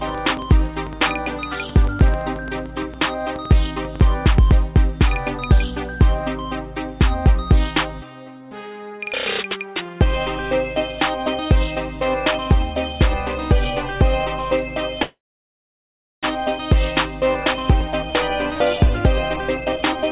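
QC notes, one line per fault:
0.09–4.01 s, train of clicks: a burst of ticking sits over the sound for the first four seconds, about 8 clicks a second but unevenly spaced, some 30 in all, with peaks a few dB above the programme (about 5 dB). They're all much the same shape and carry straight through the quieter moments, so they're riding on top rather than coming from the source. Likely cause is interference from nearby gear or a struggling interface.
15.02–16.25 s, call audio freeze: the sound stalls for about 1.2 s. The last bit smears into a short fading buzz and then drops to silence for roughly 1.06 s before picking up exactly where it left off. Nothing is lost; the gap is inserted, so everything afterwards runs about 1.2 s late. That fits packets held up in transit with the jitter buffer running dry, likely a network hiccup, with the receiver padding until they turned up.
17.35 s to the end, jitter buffer speed-up: the tail runs hurried, about 117% speed with the pitch unchanged. 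After the stall the buffer was holding too much, so the receiver trimmed it back by snipping many tiny pitch-period chunks, roughly half a second in total. That's why the timing feels rushed without any chipmunk effect. Everything stays band-limited to 4 kHz, consistent with a narrowband call codec such as G.711.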